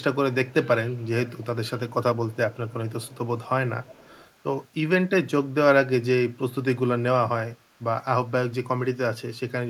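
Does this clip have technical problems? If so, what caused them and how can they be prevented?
Yes, two things stand out. First, an echo leak: a faint delayed copy of the speech, roughly 30 dB down and trailing by about 296 ms, shows up at 0.47–0.54 s, 0.93–1.46 s, 1.89–1.94 s, 2.16–3.28 s, 3.44–3.49 s and 3.83–4.32 s, and it's a touch louder in that last stretch. That's likely the far end on a speakerphone whose echo canceller let its own loudspeaker bleed back up the line. Getting that side onto a headset, or giving its canceller a proper double-talk and convergence setup, would stop it.

Second, a DC step at 8.54 s: the waveform's zero line suddenly jumps, and you hear it as a single low thump while the speech just carries on. The offset then drifts back toward zero, as a high-pass around 5 Hz in the chain pulls it down. That kind of jump comes from a converter recalibrating or an offset input being switched in mid-recording, so keeping inputs fixed during capture and DC-blocking the signal early would keep it out.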